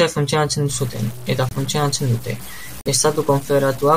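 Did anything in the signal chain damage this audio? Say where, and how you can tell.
Yes. From 0.69 s to the end of the clip, the speech carries a coarse, grainy distortion that rises and falls with the voice. The quieter parts break into gritty steps rather than clean low-level detail. The error sits roughly 20 dB below the signal and tracks it, which points to low bit depth without dither. The likely stage is a sample-format conversion that truncated to about 6 bits without adding noise to decorrelate the rounding error.

There are two abrupt dropouts to digital silence, at 1.49–1.53 s (about 38 ms) and 2.81–2.88 s (about 63 ms). Each starts with a hard edge, and the speech resumes on time with nothing skipped. That is the signature of a corrupt frame muted: compressed frames arrived damaged, the decoder rejected them, and the player substituted silence. Each gap's length fits a pair of codec frames, so the damage occurred in storage or transport before decoding.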